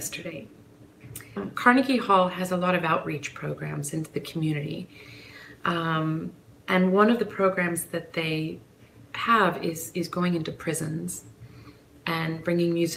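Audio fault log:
No technical faults can be heard anywhere in the signal, with nothing disturbing its flow.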